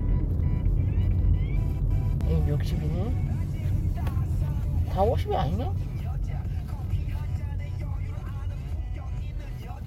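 At 2.21 s, damaged data in a compressed stream makes the decoder lose frame sync, giving a brief glitch, unlike a clean dropout's plain silence.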